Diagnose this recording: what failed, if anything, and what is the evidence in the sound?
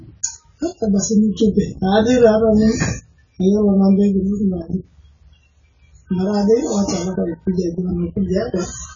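The failure is at the codec stage, with AAC compression the likely cause. Throughout the speech, nothing reaches above about 7.1 kHz, so sibilants lose their crispness and the tone is dull. A heavily squeezed encoder, consistent with roughly 16 kbps AAC-LC, drops or noise-fills the bands it cannot afford, which gives smeared, warbling vowels and fizzy consonants. On a spectrogram this shows as a hard ceiling near 7.1 kHz and patchy, holed bands below it.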